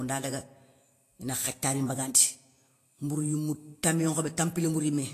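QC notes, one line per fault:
Throughout: Vorbis compression, likely, plainly audible; coarse treble quantisation turns fine detail into hiss-like grain, roughening the speech and smearing attacks, consistent with roughly 34 kbps.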